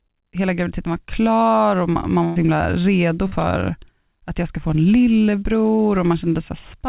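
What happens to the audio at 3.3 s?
Just after "himla redo", from 3.28 to 3.33 s, there is a short concealed packet loss. About 40 ms of audio arrived too late, and the receiver extended the preceding sound to cover the gap. It is heard as a brief smear or wobble. On a spectrogram it appears as a blurred, repeated patch, and the waveform shows a short, overly regular stretch.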